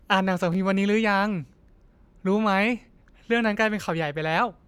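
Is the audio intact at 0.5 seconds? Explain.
No. From 0.52 to 0.55 s the speech briefly jumbles. These are chunks out of order: one 11.61 ms chunk plays one chunk late, swapping places with its neighbour and leaving three hard edges.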